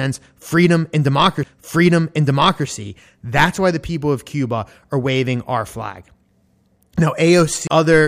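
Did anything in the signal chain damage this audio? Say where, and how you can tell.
Yes. Two CD skips, at the playback stage from disc, damage this speech. At 1.43 s there's a very brief mute, about 3 ms, with a tick, and at 7.67 s a longer gap of about 30 ms before the sound resumes from a different point. In each case the laser has lost its track and landed on another turn of the spiral, so the audio jumps rather than simply dropping out. That jump in position, not just a silence, separates it from a buffer dropout.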